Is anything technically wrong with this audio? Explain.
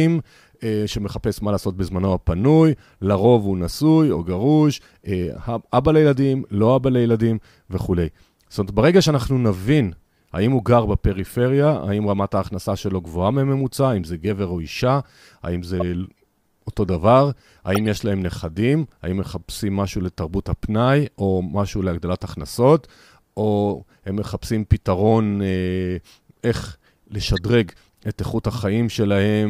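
Yes. There are three corrupt frame decoded events, at 15.80–15.82 s, 17.75–17.79 s and 27.36–27.38 s. Damaged compressed frames were played anyway. Energy lands at wrong frequencies. Each is a brief spurious burst. The middle one spans several frames and peaks near -10 dBFS.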